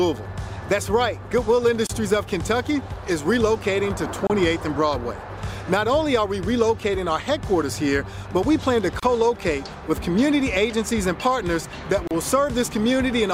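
Four brief dropouts break the continuous sound, at 1.87 to 1.89 s, 4.27 to 4.30 s, 9.00 to 9.03 s and 12.07 to 12.11 s, lasting 27, 29, 31 and 34 ms. Each is a gap at a join of encoded pieces: separately encoded segments were butted together with their encoder start-up delay and final-frame padding left in. They sound like tiny stutters or ticks of silence before the audio resumes where it left off. A waveform shows a short flat-line with slightly softened edges, and a spectrogram shows a narrow blank vertical stripe across all frequencies.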